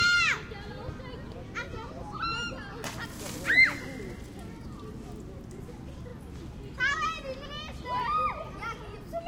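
A recording of sounds with repeated frames. A 40 ms block replays at 6.09 s and an 80 ms block at 7.45 s, making brief stutters and lengthening the audio.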